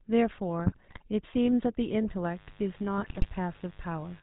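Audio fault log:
Throughout: GSM full-rate codec. The speech has the buzzy, gravelly texture of the original GSM coder, with nothing above 4 kHz. That points to the 13 kbps full-rate scheme, which models the vocal tract and drives it with a regular pulse train that keeps only every third excitation sample. Unlike plain band-limiting, the roughness is built into the voicing itself and sounds grainy rather than just muffled.
0.64–1.02 s and 2.96–3.28 s: GSM bit errors. In both stretches the speech breaks into squawks, pops and gargling. That is what happens when corrupted filter, pitch or gain parameters reach the decoder and bend the spectrum or make the level jump for individual frames. Unlike dropouts or concealment, which go quiet or smear, these bursts are loud and erratic. The density of the damage suggests a weak radio link with an error rate around 2 to 3 percent.
2.26–4.23 s: mains buzz. 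From 2.26 s to the end, a steady, raspy buzz sits roughly 25 dB below the speech. Its harmonics are spaced at 50 Hz and reach up into the kilohertz range. The sharp switching spikes that come twice per mains cycle, typically from a dimmer, a rectifier or a missing shield, are what make it rasp rather than hum. It stays constant underneath the speech, unlike the bursty codec errors that overlap it at 2.96–3.28 s.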